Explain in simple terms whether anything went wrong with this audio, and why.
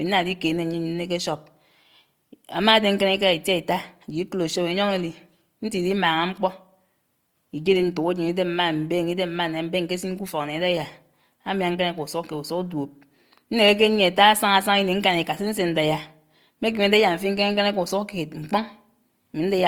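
Something did go wrong, and it lasts the whole clip, from the first second to the last. The speech has a rough, grainy, fizzy texture, as if a fine layer of noise were woven into it, and the clearer tones lose their smoothness. This is likely Opus compression, which squeezes the sound and fills the gaps with noise-like detail. Unlike MP3 damage, there is less watery swirling or warbling, and the sound stays bright and full-range rather than muffled.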